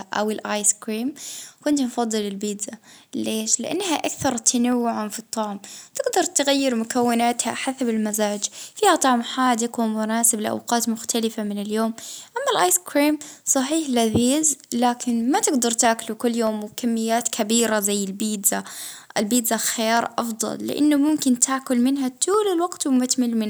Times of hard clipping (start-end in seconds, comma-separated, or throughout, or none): none